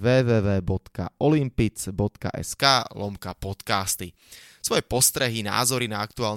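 Pre-emphasis left on affects this speech clip from 2.59 s to the end. From that point the treble lift applied before recording or transmission is never undone by the matching de-emphasis, so high frequencies sit about 11 dB above the 1 kHz level at 10 kHz, a shape consistent with a J.17 curve. The speech turns thin and bright, with sibilants hissing noticeably harder than in the opening stretch.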